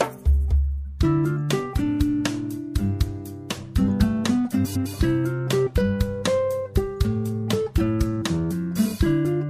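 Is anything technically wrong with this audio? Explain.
Yes, there's one glitch. At 4.65 to 4.87 s, frames arrived out of order: two neighbouring blocks of about 104.5 ms got swapped, giving a garbled flutter, and no time lost.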